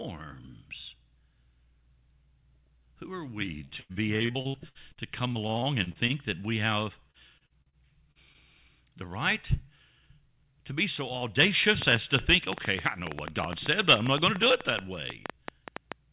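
Speech heard through a call path whose G.711 mu-law coding, which fits 64 kbps, leaves nothing above 4 kHz turns choppy and robotic from 3.65 to 6.12 s, right after "are we". That is repeated packet loss: 18 gaps, the longest 92 ms, were patched by stretching the previous sound, covering about a quarter of the span. The same breakup returns from 7.11 to 7.76 s after "that we have", with 5 gaps. Two brief smears follow at 8.12 to 8.18 s and 8.33 to 8.37 s, just before "the right". These are short concealed packet loss, where missing audio was synthesised from what came before, and the second coincides with the playout delay tightening by roughly 20 ms. From 11.82 s to the end, an uneven train of clicks ticks at about 7 per second, peaking about 15 dB above the speech, most likely from electrical interference or a faulty connection or power supply.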